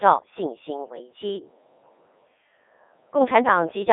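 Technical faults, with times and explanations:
Throughout, Codec 2 vocoder: the speech carries heavy codec damage, sounding robotic and buzzy within a 300 Hz to 3.6 kHz band, with nothing above 3.8 kHz. The decoder rebuilds the voice from sine waves using only pitch, voicing, energy and spectral envelope, at 3.2 kbit/s, discarding the original waveform.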